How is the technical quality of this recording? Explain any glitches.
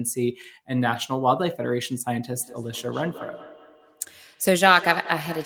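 The recording is marred by feedback echo between two devices from 2.4 s to the end: the speech returns about every fifth of a second, peaking about 12 dB below the voice. Another device replays this microphone's signal, which is picked up again and escapes echo cancellation. Unlike smoothly decaying room reverb, the repeats come at a fixed interval and sound thinner and ringing.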